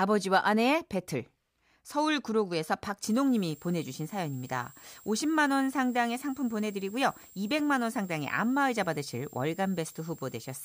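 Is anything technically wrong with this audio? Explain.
Yes. From 3.02 s to the end, a switching supply whistle drifts between 7.4 and 7.7 kHz, about 25 dB below the speech. A power supply is switching at an audible rate.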